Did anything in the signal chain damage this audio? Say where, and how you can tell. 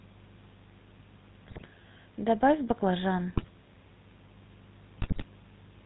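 Yes, the codec stage. The whole clip has that buzzy, gravelly roughness and nothing above 4 kHz, which fits a 13 kbps GSM full-rate codec. It models the vocal tract and drives it with a thinned-out pulse excitation, so the damage is plainly audible.

There are also GSM bit errors from the network side, at 1.48–1.69 s, 3.30–3.49 s and 4.98–5.25 s. The speech breaks into squawks and gargling there because corrupted filter, pitch and gain values reach the decoder and warp the spectrum or spike the level frame by frame.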